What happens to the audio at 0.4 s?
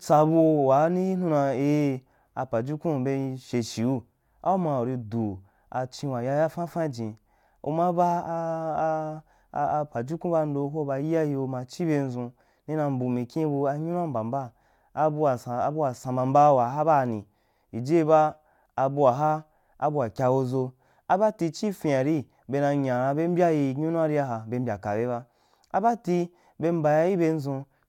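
Nothing goes wrong at 0.4 s; the speech plays through that moment intact, with no dropout, click or distortion.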